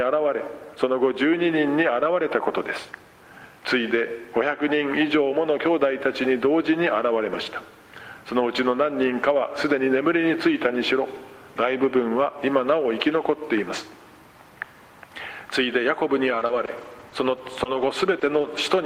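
From 16.29 to 18.59 s there are scattered short gaps. About seven small dropouts, none longer than roughly 20 ms, get covered by stretching the last bit of sound. Each patch comes through as a quick tick or smear against otherwise clear audio.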